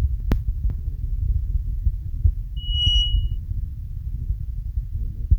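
A speech clip where, from 2.56 to 3.38 s, a piercing 2.9 kHz tone swells over roughly a third of a second to sit about 5 dB above the voice: loudspeaker feedback squeal, the microphone re-amplifying its own loudspeaker output at that frequency.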